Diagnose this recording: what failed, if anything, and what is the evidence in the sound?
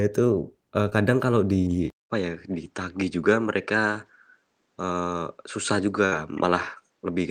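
Short concealed packet loss, at the network stage. From 0.89 to 0.93 s there is a brief smear in the speech. About 20 ms of audio never arrived in time. The decoder extended the preceding sound to cover the hole, then blended back.

Input switched to a poorer device, at the capture stage. At 1.90 s the sound drops out for 200 ms. After that, nothing remains above 8.8 kHz, and a new noise floor sits about 50 dB down. Loudness stays roughly level. This likely comes from a switch to another microphone.

Burst of packet loss, at the network stage. From 6.05 to 6.14 s the speech turns into a held, fading continuation of the last sound. About 60 ms went missing. The receiver stretched the last sound and faded it, then resumed later on.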